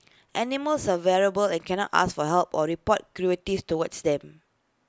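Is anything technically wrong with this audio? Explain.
No, nothing technically wrong can be heard here.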